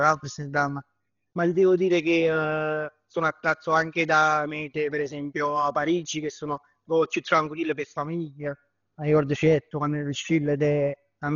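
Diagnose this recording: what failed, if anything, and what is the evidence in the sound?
Codec stage: the speech is dull throughout, with nothing above 7 kHz and rough, fluttering noise around tones, fitting 32 kbps, likely Dolby Digital compression starving lines of bits.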